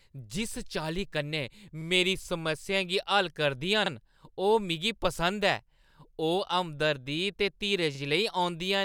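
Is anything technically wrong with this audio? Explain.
Yes. A brief stutter recurs at 1.82, 3.86, 5.91 and 7.95 s, each replaying 44 ms of speech. This is overlapping chunks: the audio was handled in 2-second blocks, each starting 44 ms before the previous one ended, so every join plays that sliver twice.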